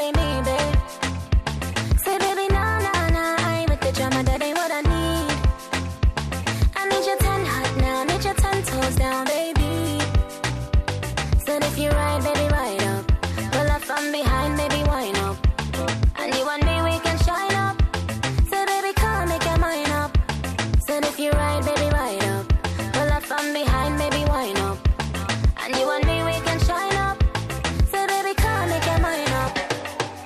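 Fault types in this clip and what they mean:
No technical fault can be heard anywhere in this clip. There is nothing to list under any fault type.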